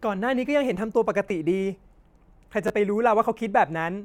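At 1.29 s, then 2.68 to 2.70 s, a repeated buffer: late data forced a replay, which fits a 512-sample buffer, heard as a click or brief buzz.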